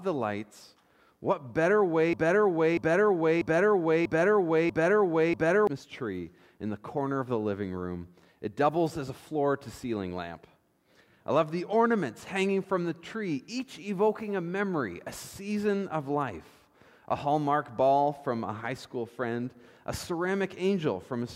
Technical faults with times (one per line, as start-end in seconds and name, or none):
2.13-5.67 broken-record loop